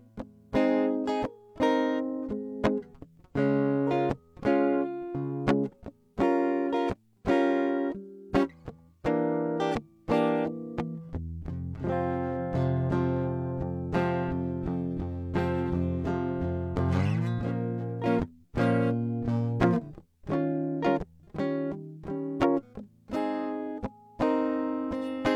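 No technical faults can be heard anywhere in the music; the signal stays continuous and stable throughout.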